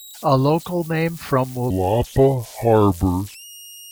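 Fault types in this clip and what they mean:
converter idle tones: Throughout the clip a tone sits around 4 kHz, about 24 dB below the speech. It comes from a delta-sigma converter running without dither. When the input is small, the converter's output bits fall into a repeating cycle instead of varying randomly, and that cycle produces a fixed tone. Because nothing breaks up the pattern, the whistle persists beneath the speech and is easiest to notice where the talking is quietest.
section at the wrong speed: From 1.70 s, right after "local name from", to the end of the clip, the speech runs at 0.742 times its proper speed. Pitch and tempo drop together, roughly five semitones lower, so the voice turns noticeably deeper, slower and drawn out at that point. The likely cause is that this portion was played or resampled against the wrong clock rate, stretching it in time without any pitch correction.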